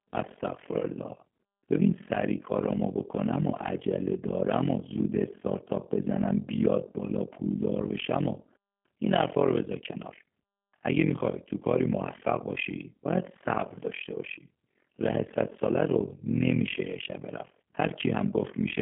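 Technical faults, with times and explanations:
Throughout: overlap-add ripple. The level pumps up and down around 40 times a second, dipping by about 60 dB each cycle. This happens because frames were rejoined with overlapping windows whose gains do not add to a constant. It sounds like a harsh, robotic flutter locked to the frame rate, rather than the slower, smoother swell of ordinary tremolo.
Throughout: G.729 codec. The speech sits in a narrow 150 to 3400 Hz line band with nothing above 3.5 kHz, and has a plainly rough, synthetic texture, which fits an 8 kbit/s G.729 codec. That codec rebuilds each frame from a vocal tract filter, pitch predictor and a few pulses. Unlike a simple low-pass filter, it also roughens the sound inside the passband.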